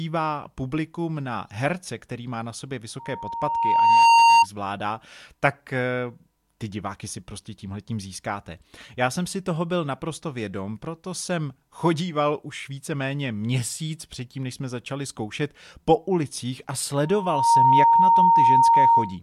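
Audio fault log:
2.99–4.46 s and 17.03–19.18 s, loudspeaker feedback squeal: a 926 Hz tone swells over about a second after "který má na sobě", then half a second after "zkoušet po ulicích a", reaching about 15 dB and 10 dB above the speech, as the mic-to-speaker loop exceeds unity gain.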